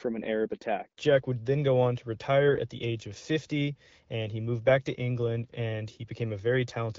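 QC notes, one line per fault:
2.48 to 2.60 s, AMR bit errors: right after "then go on to" and before "the age of", the speech turns hoarse and gargly for a moment. Bit errors hit about six frames at a rate of roughly 5 percent, scrambling the pulse positions and the finer pitch, gain and spectral values, so level and pitch hold but the texture goes scratchy.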